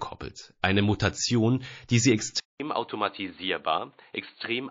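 A speech clip with watery, swirling artefacts throughout. The treble is thin and attacks smear. This is most likely MP3 compression at a low bitrate, which fits about 32 kbps. Weak frequency lines flicker on and off between frames. At 2.40 s, just after "die sie", the sound drops out for 0.2 s. It returns duller and boxier, with nothing above 4.4 kHz. It is also about 10 dB quieter and has a faint new hiss underneath. This likely means the input switched to a poorer device.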